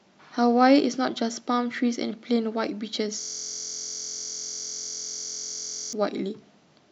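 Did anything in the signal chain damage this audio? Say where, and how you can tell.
Yes. From 3.21 s to 5.93 s the speech stops and becomes a steady, rough buzz at about 43 Hz, one identical 23 ms slice repeating more than a hundred times. This is a system hang loop at the driver or buffer stage. The host or driver froze, and the audio hardware kept replaying the same ring buffer. A 23 ms loop fits a 1024-sample buffer. Because it is so short, it is heard as a pitched buzz rather than a stutter.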